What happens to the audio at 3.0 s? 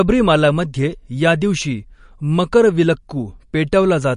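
At 3.0 s the speech sounds watery and swirly, with dull treble that stops near 10.5 kHz. This runs through the whole clip and is likely MP3 compression at a low bitrate, around 40 kbps, where weak frequency lines flicker between frames and the top is cut.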